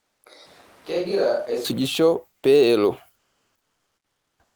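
From 0.46 to 1.64 s the speech turns roomy and hollow, thinner in the bass and roughly 5 dB quieter, with room noise rising to around 30 dB under the speech. The abrupt change in and out likely means a switch to a distant microphone when the close one dropped out.

Between 3.15 and 4.55 s, for about 1.4 s, the natural background gives way to a flat, featureless hiss about 11 dB quieter, sitting about 52 dB below the loudest speech. This is comfort noise in place of the background, likely from discontinuous transmission such as Opus DTX filling the silence with synthetic noise.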